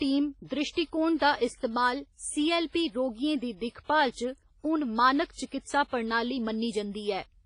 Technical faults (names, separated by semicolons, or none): WMA compression; pre-echo